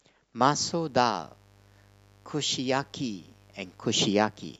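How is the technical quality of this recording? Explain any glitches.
The technical quality is compromised by mains buzz from 0.52 s to the end. Switching spikes at twice the 50 Hz mains rate leak in, adding a steady raspy buzz under the speech.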